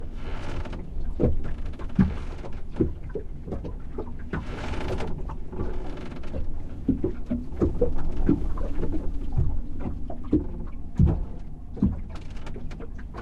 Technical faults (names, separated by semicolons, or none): DAB burbling